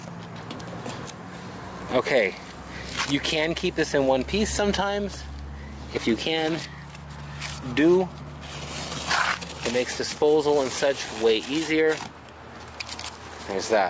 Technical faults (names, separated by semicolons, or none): none